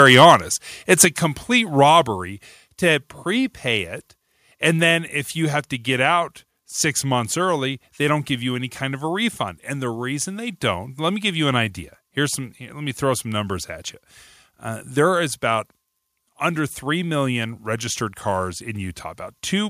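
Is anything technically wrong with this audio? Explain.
Yes. From 0.07 to 0.35 s the opening speech shows microphone overload: the loudest peaks run about 3 dB past the converter's ceiling, likely because the input gain was set too high, and roughly 2% of samples are flattened at the limit. Their tops are sheared off, so those syllables take on a harsh, crackly edge instead of a clean, rounded attack.

Microphone volume stepped down happens twice, at 1.05 s and again at 2.07 s. Each time the whole signal, voice and background together, drops abruptly, first by about 6 dB and then by a further 4 dB or so. This is most likely the call software responding to the earlier clipping by cutting the device's input gain in discrete jumps rather than gradually, which is why the level falls in sudden steps.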